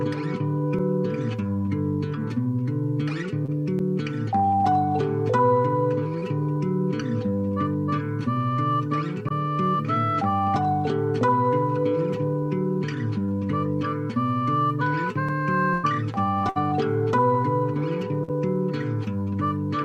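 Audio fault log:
3.45–3.50 s, 6.20–6.23 s, 13.25–13.29 s and 18.23–18.30 s: short concealed packet loss. About 20 ms of audio was lost in each of the first three and about 40 ms in the last. Each time the decoder extended the preceding sound and then crossfaded back, so each event is a brief smear or wobble. On a spectrogram the last sound flattens into a slightly blurred, repeated slice. In the waveform the stretch looks copied, with a small seam at the rejoin.
15.73–15.85 s and 16.49–16.57 s: burst of packet loss. Roughly 100 ms and then 60 ms of consecutive audio went missing. The receiver stretched the last sound and faded it, so each gap is a held buzz or hiss that sinks away before the audio resumes further on, with the lost portion skipped. A spectrogram shows a stretch of frozen, dimming partials. The waveform shows a repeating, decaying envelope with a discontinuity where real audio returns.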